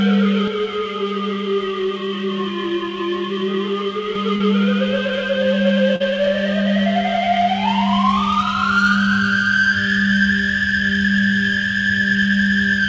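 From 0.48 s to 4.15 s, one channel runs late by roughly 20 ms before the two are summed to mono, causing channel delay (comb filtering). The shared content cancels from close to 20 Hz upward in a dense row of fixed notches, leaving the sound rough or slightly doubled.

Short concealed packet loss then strikes twice, at 4.36 to 4.42 s and at 5.96 to 6.02 s. Each time about 40 ms of audio failed to arrive, and the receiver extended the preceding sound to bridge the hole. Both gaps come through as a brief smear or wobble. Throughout, the call path passes nothing above 8 kHz.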